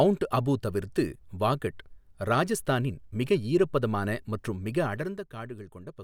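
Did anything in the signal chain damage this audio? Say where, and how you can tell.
Yes. Zipper noise from about 4.82 to 5.28 s, during a gain stage in the processing or buffer path: the level drops by roughly 10 dB in unsmoothed steps at around 50 per second, each step leaving a small click, so the speech carries a fine ticking while the gain moves.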